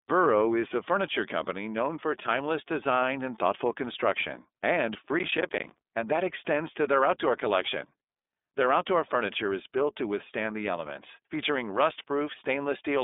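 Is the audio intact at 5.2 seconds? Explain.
No. Processor overload crackle runs from 5.19 to 5.87 s, between "and thoughtful construction and" and "and that extends to". The processor misses many buffer deadlines in a row, about twenty short blocks of roughly 10 ms each, and every miss drops to silence with hard edges. The result is a burst of gritty crackle.

The iLBC codec also affects this moment, as it does the whole clip. Each 30 ms frame is coded on its own, which fits a 13.33 kbps mode. The sound is confined to about 250 Hz to 3.6 kHz, with nothing above 3.7 kHz, and it has a plainly rough, synthetic edge.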